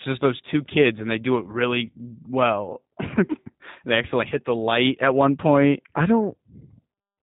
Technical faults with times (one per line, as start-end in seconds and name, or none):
0.00-7.22 G.729 codec